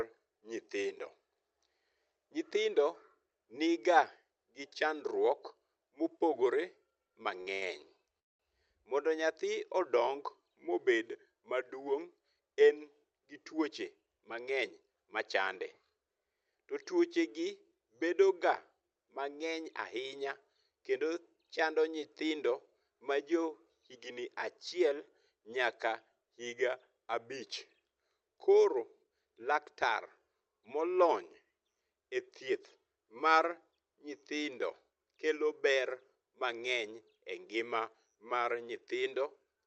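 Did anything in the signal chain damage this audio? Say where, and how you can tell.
Yes. Between 7.07 and 7.63 s the network and jitter-buffer stage produced repeated stalls (stutter). There are five short holds, the longest about 72 ms, and together they fill roughly 29% of that stretch with the last sound prolonged. Nothing is skipped. Unlike a single freeze, the audio drags in several small hitches.

From 8.19 to 8.41 s there is a call audio freeze: 200 ms of silence, after which the sound resumes exactly where it stopped. It is one clean gap rather than a stutter of small holds. The likely cause is a sudden 200 ms jump in packet delay that emptied the jitter buffer.

Jitter buffer speed-up shows at 12.16 to 14.92 s (107%, about a fifth of a second trimmed), 32.50 to 33.02 s (109%) and 35.62 to 36.16 s (106%). The later two each lose a few tens of milliseconds. The sound hurries while its pitch stays put, which rules out a resampling or clock error.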